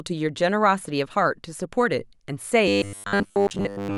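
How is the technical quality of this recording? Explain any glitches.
The recording breaks down near the end: from 2.68 s to the close, it shows robotic sound from repeated short buffers. Audio likely arrived too slowly, so roughly 10 ms chunks were looped over most of that stretch, imposing a rigid, metallic 100 Hz buzz on the speech.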